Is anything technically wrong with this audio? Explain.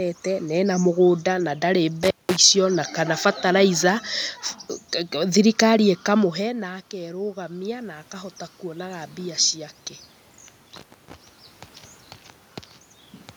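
Yes, there are two kinds of fault.

The first is an intermittent contact, heard twice: from 2.03 to 2.37 s, and again from 10.77 to 11.14 s. A loose plug or cable briefly loses its connection, for roughly 187 ms the first time and 291 ms the second. While the contact is open, the speech signal is gone and only a faint hiss remains. Each gap begins and ends with a crackle as the connection breaks and remakes.

The second is automatic gain rising, from 6.39 to 9.8 s. Just before it, around 6 s, the talker moves away from the microphone and the level drops by about 15 dB. The automatic gain control reads that as a weak input and raises its gain gradually, by about 7 dB over more than three seconds. Because the gain applies to everything reaching the microphone, the voice and the room noise swell up together rather than the voice alone.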